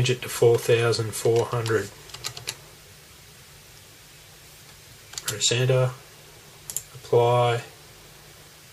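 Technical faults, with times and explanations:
No technical faults are present in this clip.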